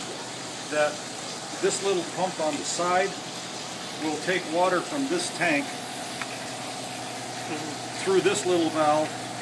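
No technical faults can be heard anywhere in this clip.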